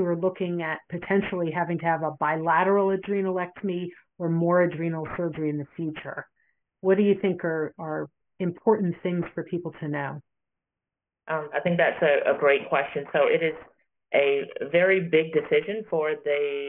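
From start to finish the audio carries aliasing: content above 3 kHz folds back as wrong, inharmonic tones roughly 20 dB below the signal, pointing to a 6 kHz resampling with no anti-alias filter. Unlike plain band-limiting, which only dulls, this sounds gritty and metallic.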